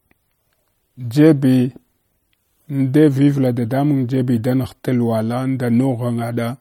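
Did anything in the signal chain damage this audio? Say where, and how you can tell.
Yes, MP3 compression runs throughout the speech, and the damage is plainly audible from start to finish. Nothing is present above 18.7 kHz, where a lossy encoder has sliced off the treble. The damage likely comes from the codec stage. With too few bits, the encoder keeps only the frequency lines its hearing model rates as important and drops weaker detail frame by frame. That fits a low bitrate of around 48 kbps.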